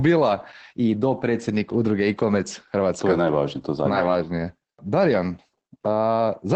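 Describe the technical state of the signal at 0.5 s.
At 0.5 s, as throughout the clip, the speech carries plainly audible Opus voice compression: SILK-style linear-prediction coding at a rate consistent with about 12 kbps, with nothing above 9 kHz, so the voice sounds muffled, hoarse and faintly robotic.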